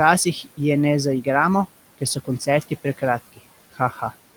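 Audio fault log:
throughout: noise suppressor artifacts. The steady background is pulled down by about 17 dB between phrases and rises under speech; a spectrogram shows a flickering, patchy noise floor.
1.98–3.03 s, 3.73–4.13 s: speech cut by the noise suppressor. After "je ne zaigramo", and again later, quiet speech portions of roughly 200 ms in total in each span are taken for noise and dropped by up to about 18 dB and about 13 dB respectively. They sound swallowed, with waveform dips and missing spectral energy.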